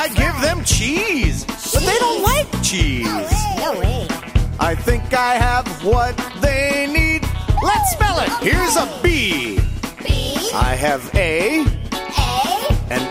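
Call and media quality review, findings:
No faults found; nothing to flag.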